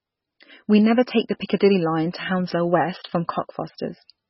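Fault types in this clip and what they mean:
MP3 compression: nothing above 5.6 kHz, plus a watery, swirly texture that simple filtering lacks; likely heavy MP3 encoding, fitting roughly 16 kbps.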